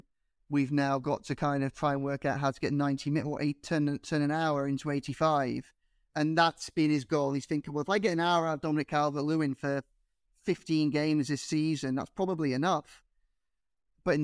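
No faults can be heard anywhere in the recording.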